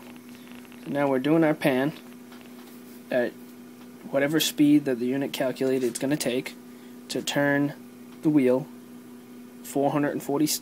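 From 0.03 to 2.47 s a train of clicks ticks over the sound, roughly thirty pulses at about 12.7 per second, unevenly spaced and about as loud as the programme. The likely cause is interference or a faulty connection or power supply. They appear as thin vertical lines on a spectrogram and sharp spikes in the waveform.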